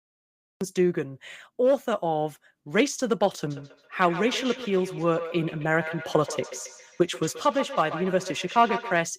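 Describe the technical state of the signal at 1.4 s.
At 1.4 s the speech signal is intact, with no audible fault at that moment.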